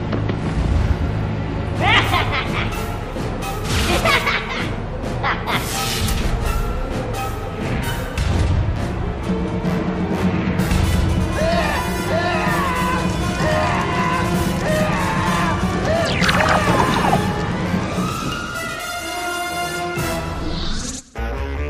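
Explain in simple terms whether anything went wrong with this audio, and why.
Nothing went wrong here; no problems can be heard.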